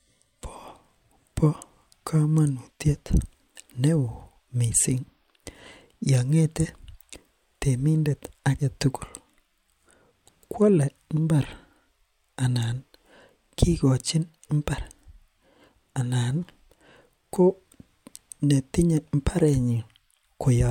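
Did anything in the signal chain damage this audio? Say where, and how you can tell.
No, nothing in the chain from capture through playback leaves an audible mark on this speech recording.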